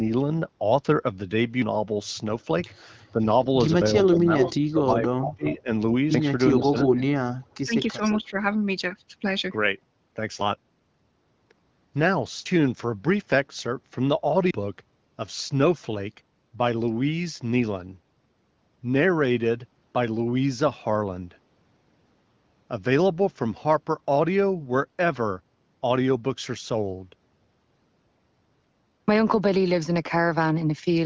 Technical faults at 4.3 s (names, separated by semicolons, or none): speech suppressed in double talk; echo leak